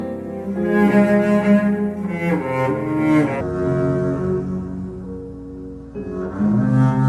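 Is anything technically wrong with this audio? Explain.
Yes. From 3.41 s to the end there's a wrong sample rate fault. Everything drops to two-thirds speed and about seven semitones lower, which fits 48 kHz material played back at 32 kHz.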